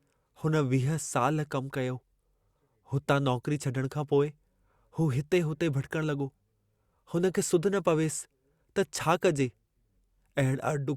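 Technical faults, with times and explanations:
No technical faults can be heard in the speech signal at any point.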